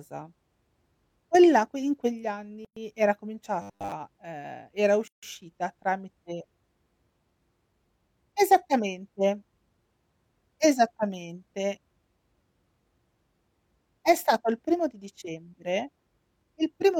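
A speech clip with two kinds of fault. At 2.65 to 2.77 s, right after "la que in quegli", there is a gap at a join of encoded pieces. The sound drops out for about 117 ms with smeared edges, then resumes where it stopped. A second gap, about 151 ms, opens at 5.08 to 5.23 s, just after "ehm era". Both come from separately encoded segments joined without trimming the encoder's leading delay and final-frame padding. From 3.62 to 3.93 s, just before "ehm era", the speech turns into a rigid, metallic buzz at 100 Hz. This is robotic sound from repeated short buffers. It is likely caused by audio arriving too seldom, with most of that stretch filled by repeating the last 10 ms or so. That repetition rate sets the buzz at 100 Hz.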